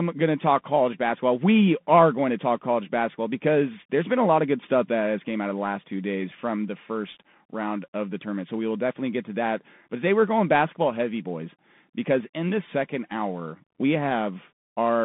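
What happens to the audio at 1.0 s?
At 1.0 s the speech is passing through a Bluetooth CVSD headset codec, as it does for the whole clip. The encoder sends a single up-or-down bit per sample and keeps adjusting its step size, and the line is confined to roughly 150 Hz to 3.6 kHz, consistent with a 64 kbps headset link. The result is muffled, narrowband speech with plainly audible damage: granular hiss beneath the voice, scratchy s sounds, and distortion where loud high content outruns the step size.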